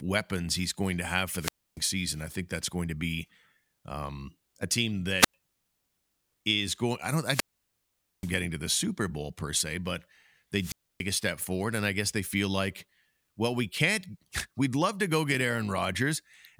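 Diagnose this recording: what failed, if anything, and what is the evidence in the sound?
The analogue FM radio link between the wireless microphone and its receiver faded repeatedly, and each time the receiver's squelch shut the output off. This is a wireless microphone squelch dropout, heard four times in the speech: 1.38 to 1.80 s, 5.18 to 5.34 s, 7.22 to 8.34 s, and 10.59 to 11.05 s. Each one has a short swell of hiss, then a muted hole of 0.29 s, 0.09 s, 0.83 s and 0.28 s respectively, before the speech comes back.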